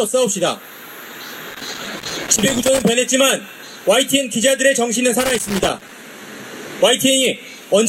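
An irregular burst of crackle and scratching breaks in from 1.50 to 2.88 s, and a shorter burst returns from 5.20 to 5.93 s. Both are loose connector crackle: a worn or dirty contact in the signal path is making and losing connection as it shifts, so the audio is chopped on and off in rapid, uneven fragments, and any DC present on the line turns each make and break into a pop.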